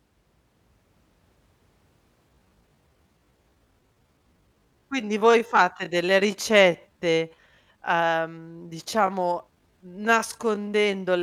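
Speech with a time-stretched section from 2.25 s to the end, just before "il procedimento gli": pace drops to about 0.72x while pitch holds, likely from pitch-preserving stretching.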